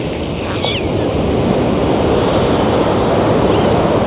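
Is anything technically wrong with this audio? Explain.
No, nothing technically wrong can be heard anywhere in this clip.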